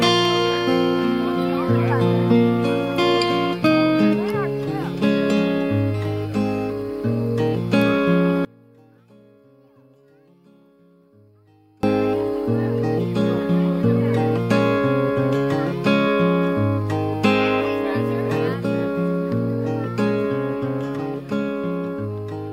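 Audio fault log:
8.45–11.83 s, one channel inverted: the sound suddenly drops by about 32 dB to a faint copy, then comes back. Likely one side flipped polarity, so whatever's shared between left and right cancels in mono, leaving only the faint difference.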